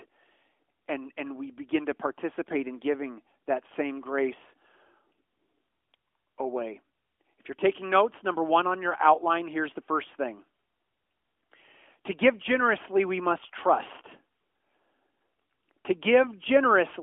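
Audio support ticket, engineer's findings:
No faults found in speech.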